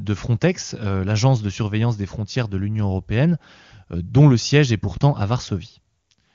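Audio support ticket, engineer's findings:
Speech over the AMR wideband (HD Voice) path; nothing stood out on listening.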